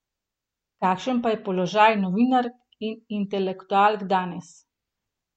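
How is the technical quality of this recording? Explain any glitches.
Listening closely, nothing in the recording stood out as a technical problem or glitch.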